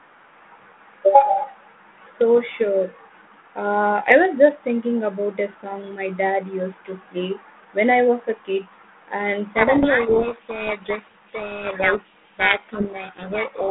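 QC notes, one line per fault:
9.54 s to the end (13.7 s), codec payload misread: the receiver begins unpacking the G.726 code words with their bit order reversed, so each 4-bit word (consistent with the 32 kbit/s rate) decodes to the wrong step size and sign. The adaptive predictor is thrown off by these false differences, and the speech, previously only lightly marked by the codec within its 150 Hz to 3.5 kHz telephone band, sinks under harsh, rasping distortion that continues to the end of the clip.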